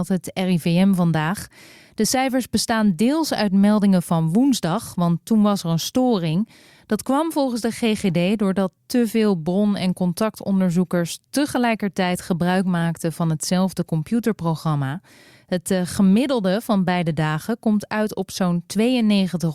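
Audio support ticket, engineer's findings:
No fault found in the speech recording. Nothing to escalate for this ticket.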